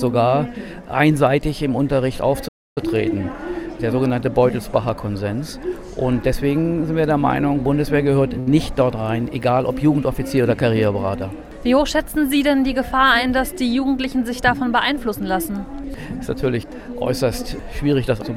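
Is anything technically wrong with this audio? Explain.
Yes, there are two faults. From 2.48 to 2.78 s there is a playback stall: the output goes fully silent for about 280 ms, likely because the player ran short of data or was blocked, then resumes. At 8.40 to 8.50 s a short stall from a late packet stretches the last sound for 70 ms rather than going silent, so it is held too long, nothing is lost, and everything after it runs 70 ms later.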